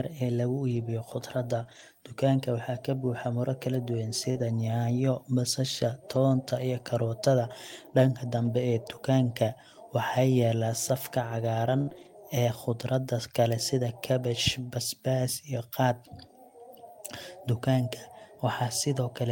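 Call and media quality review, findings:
Lost packet rebuilt from error correction: jitter-buffer/network loss, recovered by Opus in-band FEC in the decoder. Six runs: 0.67–0.81 s, 1.67–1.81 s, 4.35–4.41 s, 6.07–6.17 s, 8.37–8.47 s, 11.93–12.07 s. Each runs 40 to 80 ms, which fits two to four 20 ms packets. The next packet's low-bitrate copy is played in place of each lost packet, so there is no gap. Symptom: stretches of rougher, noisier, coarser-sounding audio.

Short concealed packet loss: packets late or lost with no FEC copy, so the decoder's packet loss concealment filled the gap. Three events: 1.63–1.67 s (about 20 ms), 4.31–4.37 s (about 40 ms, running into the FEC stretch at 4.35 s), and 11.89–11.93 s (about 20 ms). The decoder extends the last waveform and crossfades back. Symptom: brief smear or wobble. A short sound can drop out.

Burst of packet loss: consecutive packets missing at 11.81–11.89 s, about 60 ms, concealed by the decoder. 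The last sound is extended and faded, heard as a held buzz or decaying hiss. Playback then resumes further along, with that span of audio gone. It chains directly into the short concealment at 11.89 s and the FEC stretch to 12.07 s, making roughly a quarter-second degraded run.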